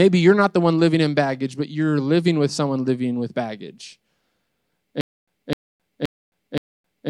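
Stutter with silent gaps begins at 5.01 s and runs to the end of the speech. A short fragment of about 257 ms plays, then about 266 ms of digital silence follows, and this cycle repeats four times at an even 523 ms period. The likely cause is a stalled player or stream that replayed its last buffered fragment at each retry before running empty, so the speech that should have followed is lost.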